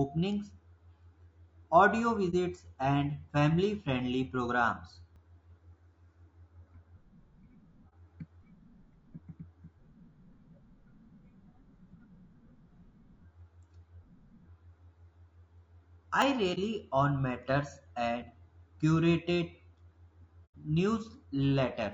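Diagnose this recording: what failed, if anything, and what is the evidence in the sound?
Codec stage. The speech is rough and grainy throughout, with noise filling the gaps between harmonics and a thin, synthetic top band. This is likely low-delay AAC compression (AAC-ELD). The short frames blur pitch detail, and the damage fits a bitrate near 32 kbps.

Network and decoder stage. AAC frame loss with muting appears at 2.30, 7.89, 16.54 and 20.45 s. The first three holes are about 30 ms each. The last lasts about 90 ms, which fits three consecutive lost frames. The decoder zeroed the missing spectrum. Overlapping windows fade each gap in and out.

Driver or buffer stage. A sudden jump in the sound occurs at 5.16, 16.22 and 18.22 s. There is no silence. The audio skips ahead by roughly 20 ms each time. This points to a likely dropped buffer (overrun). Samples were overwritten before capture, and the two sides were spliced directly together.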